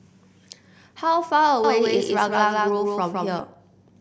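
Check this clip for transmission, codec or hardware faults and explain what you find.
One fault: a doubled audio track from 1.64 to 3.40 s. The speech plays twice. A second, full-band copy trails by roughly 150 ms, about as loud, with no decay. It starts and stops abruptly. A slower second capture path is the likely cause.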